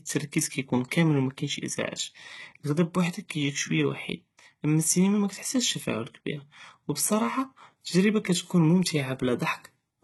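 Speech, and the whole clip has that telltale spectral-band-replication sheen, so HE-AAC compression at a very low bitrate, something like 16 kbps, is the likely cause. The damage is heavy: the treble sounds bright but synthetic because it has been copied up from lower bands rather than coded, so the s sounds come out gritty and lispy. Everything stops dead above about 11.8 kHz.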